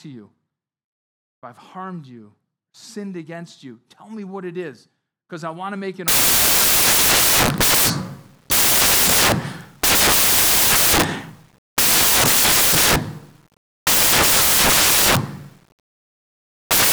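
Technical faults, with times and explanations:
6.08 to 16.92 s, samples built from the wrong bytes: just after "want to make an", the speech gives way to loud, harsh broadband noise that lasts to the end of the clip. Each sample's bytes are being put together wrongly, through a one-byte offset, a swapped byte order or a wrong alignment. The small, fast-changing low bits end up as the large part of each value. That is why the result is a loud hiss.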